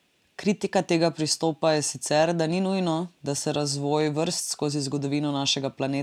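No technical faults occur at any point in the recording, so there is nothing to describe in time order.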